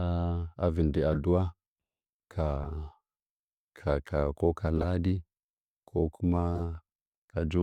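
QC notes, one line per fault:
1.13–1.18 s, 2.62–2.69 s, 4.78–4.84 s, 6.56–6.61 s: corrupt frame decoded. Each is a brief chirp-like burst spanning a few damaged compressed frames, where flipped bits gave the decoder wrong gains and codes, so energy lands at false frequencies. The first and third are loudest.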